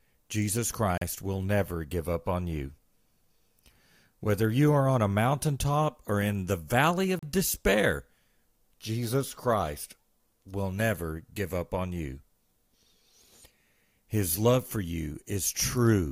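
At 0.98 to 1.02 s and again at 7.19 to 7.23 s, the speech drops to silence for about 37 ms before resuming: a Bluetooth stall, likely from delayed packets draining the headphones' buffer.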